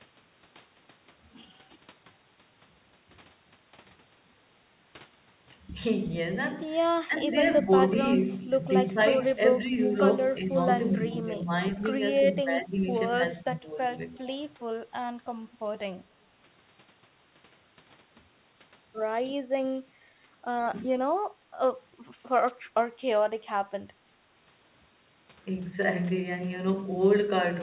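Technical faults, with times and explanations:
7.07–7.67 s, 8.94–14.42 s and 20.90–20.99 s, speech suppressed in double talk: the voice dips and thins in short pieces, by about 10 dB in the first two spans and about 15 dB in the last. The dips add up to roughly 150 ms, about a second, and roughly 100 ms. The likely cause is an echo canceller that heard both ends at once and turned everything down. Unlike an echo leak, nothing extra is added; the talker's own sound simply sags.
8.29–8.33 s, 9.83–9.88 s and 13.97–14.27 s, echo leak: a delayed copy of earlier sound returns 364 ms behind the original. It is about 35 dB down at first, about 10 dB down at 9.83 s and about 20 dB down near 14 s. This is likely residual loudspeaker echo that the far end's canceller failed to remove. It differs from double-talk suppression because sound is added, a ghost trailing at a fixed lag, rather than taken away.
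21.34–21.51 s and 24.05–24.18 s, background gated by the echo canceller: the room tone drops by about 10 dB and then about 9 dB, each time for roughly 150 ms, before coming back. The canceller clamped the microphone while the loudspeaker played. What separates this from double-talk suppression is that the quiet background ducks, not the voice, so it sounds like brief holes in the ambience.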